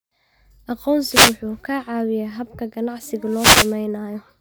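A speech clip with two wireless microphone noise hits, at 1.06 to 1.39 s and again at 3.26 to 3.80 s, right after "caawiyaa habka ganacsiga". Each one's a short swish of static where the FM radio link faded and receiver noise rose.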